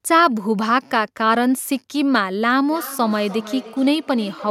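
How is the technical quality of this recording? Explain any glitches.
The recording is marred in its closing stretch by feedback echo between two devices. From 2.70 s to the end, the speech returns at a steady interval of roughly a third of a second, each repeat thinner and more ringing, peaking at about 16 dB below the voice. A second device in the room replays this microphone's signal, which gets picked up again, and neither echo canceller can remove sound it didn't play itself.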